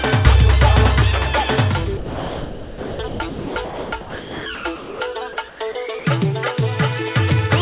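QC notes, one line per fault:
1.97–5.0 s and 5.48–6.05 s, sound chopped by the voice detector: about 2.5 s of the first stretch and about 0.2 s of the second drop out to a flat synthetic hiss, with real audio breaking through between drops. This is likely the sender's voice detector gating quiet passages and substituting comfort noise. Unlike packet-loss concealment, the gaps are filled with steady noise rather than repeated or smeared fragments. The 4 kHz band ceiling comes from the narrowband call path, not from the gating.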